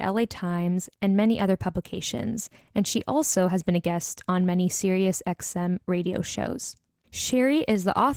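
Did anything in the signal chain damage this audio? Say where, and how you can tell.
Yes. From start to finish the speech sounds slightly hoarse and robotic, with a coarse, grainy texture in the voiced parts and an upper range that feels thin and smeared rather than crisp. The damage sits at the codec stage and points to Opus voice compression at a low rate, consistent with about 16 kbps in hybrid mode. The SILK linear-prediction layer codes the band below 8 kHz with too little excitation detail, while a starved CELT layer covers the top.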